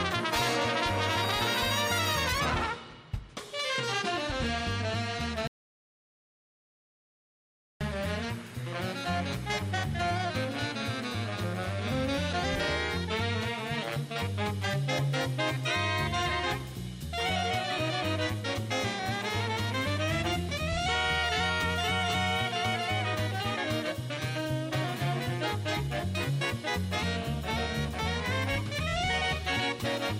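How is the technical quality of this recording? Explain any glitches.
There is one clear glitch. From 5.47 to 7.81 s, an audio dropout to silence leaves 2.33 s of silence, likely from a briefly lost input. Unlike a natural pause, even the room tone vanishes, and the sound cuts off and resumes abruptly.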